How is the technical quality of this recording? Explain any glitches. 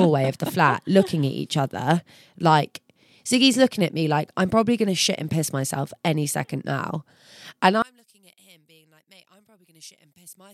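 There is one clear glitch, affecting the final stretch of this speech recording.

From 7.82 s to the end, the sound drops by about 31 dB to a faint remnant. This is likely one channel inverted, which cancels in mono. The waveform abruptly collapses to near-flat.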